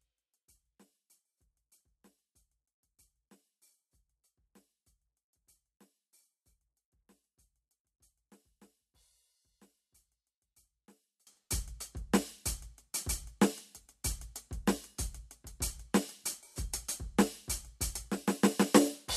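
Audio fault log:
0.0–11.27 s, one channel inverted: likely polarity reversal on one stereo channel, so the music common to both cancels in the mono sum, dropping about 34 dB.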